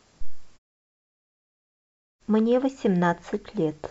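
Nothing technically wrong can be heard anywhere in this short speech recording; the signal shows no dropouts, distortion, level jumps, timing disturbances or other faults.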